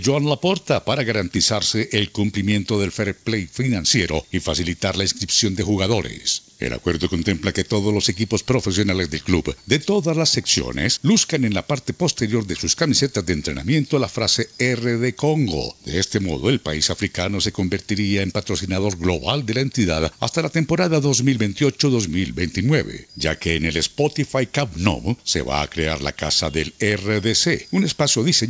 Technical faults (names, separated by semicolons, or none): none